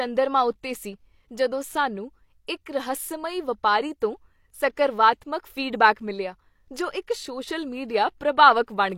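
Pre-echo at 2.47 s in this speech recording: a short hiss creeps in about 13 ms ahead of a sharp attack, softening it. The transform codec spread quantisation noise sized for the loud onset across its whole block, filling the quiet moment before it.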